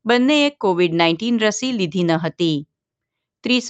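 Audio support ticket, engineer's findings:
Signal passes through normal call microphone processing and an Opus-coded WebRTC call path, with content band-limited to about 8 kHz as expected for that codec setting and no faults found.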